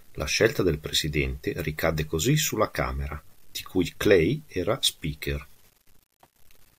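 Grainy, signal-following distortion runs through the whole speech clip, roughly 40 dB below it. That's low bit depth without dither, likely 9-bit rounding, so quiet tails crackle.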